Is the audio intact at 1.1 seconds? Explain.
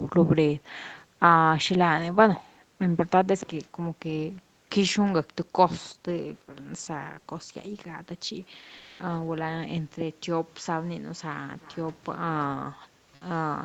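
No. At 1.1 s there is background gated by the echo canceller, from 0.57 to 1.2 s. The canceller ducked the microphone while the loudspeaker played, by up to about 29 dB. The room sound drops out for roughly 300 ms, then returns.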